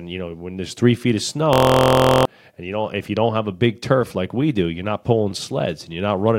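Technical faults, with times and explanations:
1.53–2.25 s, system hang loop: the sound locks into a steady buzz at about 43 Hz as one 23.2 ms fragment repeats exactly, 31 times, which fits a 1024-sample buffer cycling while the system stalled. Unlike a dropout, the gap is filled with sound rather than silence. Unlike a jitter stutter, the repeats are identical and evenly timed. Speech then resumes with roughly 0.7 s missing.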